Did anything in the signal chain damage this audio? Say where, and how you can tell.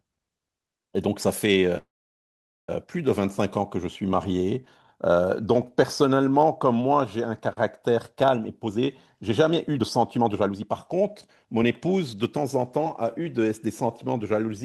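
Yes, at two points. From 1.77 to 2.70 s there is a call audio freeze, likely caused by packets stalling on the network so the jitter buffer ran dry. The receiver stretched the last fragment into a brief decaying buzz, and about 820 ms of that gap is near-silence. When the speech resumes, it picks up exactly where it stopped, with nothing skipped, so everything after it arrives roughly 0.9 s late.

From 8.40 s to the end at 14.64 s there is a jitter buffer speed-up. The buffer was holding well over its target delay, so the receiver kept cutting out pitch-period-sized slices to drain it, removing around a second in total. The speech plays about 14% faster while its pitch stays put, so the talker sounds hurried rather than higher.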